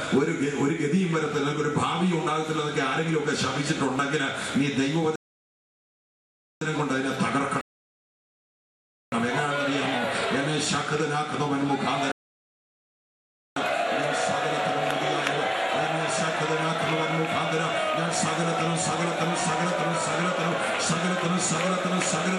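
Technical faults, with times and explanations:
5.16–6.61 s, 7.61–9.12 s and 12.12–13.56 s, rebuffering stall: the audio drops abruptly into silence three times, for about 1.46 s, 1.51 s and 1.45 s, then carries on from exactly the point where it stopped, with nothing skipped. Playback consumed the downloaded data faster than new data arrived, so the player halted and waited for its buffer to refill. Each pause is inserted time, not lost material, and together they add nearly 4.4 s to the clip.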